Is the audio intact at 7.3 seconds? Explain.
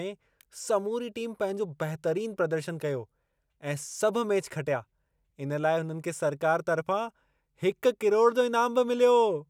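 Yes, at 7.3 seconds the speech runs intact, with no dropout, click, distortion or other fault to be heard at that moment.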